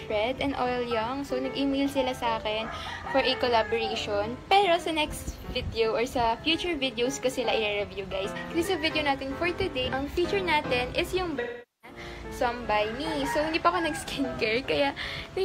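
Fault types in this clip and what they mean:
AAC frame loss with concealment: about 0.43 s of frames missing from 11.40 to 11.98 s, patched from the last good spectrum, visible as a smeared spectrogram patch.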